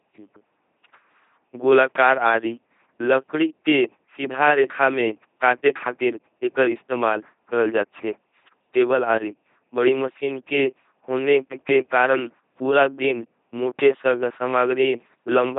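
From start to finish the speech has passed through an LPC-10 vocoder at 2.4 kbit/s, with heavy damage. Each moment is rebuilt as either a buzzing pulse train or noise through a short all-pole filter, giving a mechanical robotic timbre, and nothing is present above 3.6 kHz.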